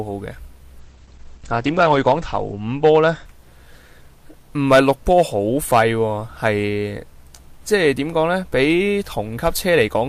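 From 0.81 to 3.83 s the audio goes rough and muffled in a call bitrate drop, with the top end falling from 20 kHz to 8 kHz, which fits Opus dropping from about 48 kbps to roughly 11 kbps. On a spectrogram, the band above 8 kHz goes dark, bottoming out for 1.2 s.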